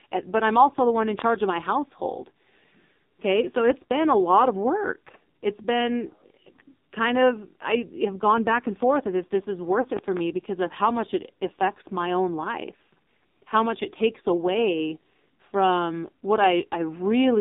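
The whole clip carries heavy AMR narrowband mobile codec damage: speech confined to roughly 200 Hz to 3.7 kHz, buzzy and synthetic, which fits a low 5.9 kbps mode. A spectrogram shows a hard ceiling near 3.7 kHz. At 9.82 to 9.87 s, a lost AMR speech frame causes a brief dip and warble as the decoder reuses old settings for about 20 ms; the waveform shows a short, smeared sag. From 9.97 to 10.21 s, a loud pop arrives as two sharp clicks, roughly 10 dB above the speech, likely from static or a switch transient; they appear as thin vertical spikes across all frequencies.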